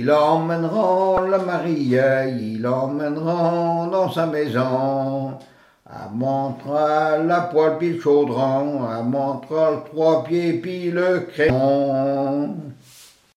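A brief glitch breaks through at 1.17 s, and a second, longer blip follows from 11.47 to 11.50 s. Both come from damaged data in a compressed stream: the decoder misreads the corrupted frames, loses sync and skips ahead to the next valid frame header.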